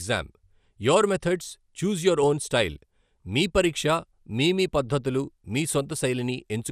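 Throughout the speech, the sound is dull, with a gurgling, granular distortion. A spectrogram shows nothing above 15 kHz and patchy upper bands. This is likely MP2 compression: sub-bands starved of bits, pointing to roughly 80 kbps, are coarsely quantised or dropped.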